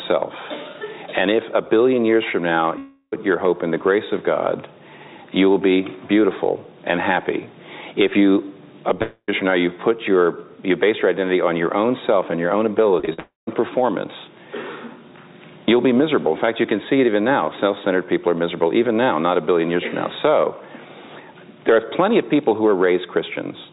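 At 2.78 to 3.14 s and 9.02 to 9.30 s, the sound smears into a fading buzz, then goes silent before resuming with material missing, likely a long network dropout. From 13.00 to 13.20 s, three short concealed packet losses, each a few hundredths of a second, cause brief wobbles without any silence. A third likely dropout follows at 13.20 to 13.49 s.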